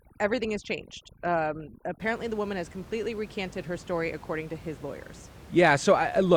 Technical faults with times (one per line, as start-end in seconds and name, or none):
0.00-2.00 overdone noise removal